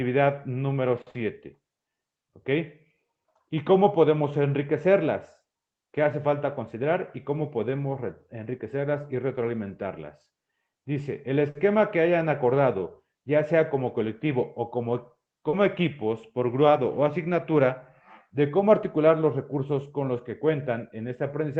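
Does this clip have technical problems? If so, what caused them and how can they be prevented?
Yes. Short stalls from late packets at 1.01–1.08 s and 11.50–11.57 s: the jitter buffer ran dry and the last sound was held about 50 ms longer, with nothing lost, unlike packet loss.

Short concealed packet loss at 1.10–1.16 s and 15.49–15.55 s: 40 ms never arrived and was replaced by a continued, smeared sound, so real audio is missing, not just delayed.

A jitter buffer speed-up from 6.44 to 7.29 s runs the sound about 4% faster at unchanged pitch, trimming roughly 40 ms to cut the built-up delay.

These can be prevented with a steadier network path, a slightly deeper jitter buffer, and redundancy or forward error correction against dropped packets.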